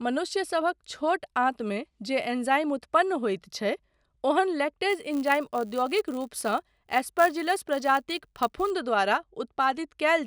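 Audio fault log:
4.89–8.71 s: filter restarted on every block. The filter drops its memory at each block boundary and starts from silence, leaving a small transient 100 times a second, which fits 10 ms blocks. This gives a 100 Hz buzz that tracks the speech level.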